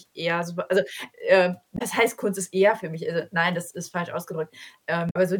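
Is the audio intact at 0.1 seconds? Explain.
Yes, at 0.1 seconds the audio is intact, with no dropout, click, distortion or other fault at that moment.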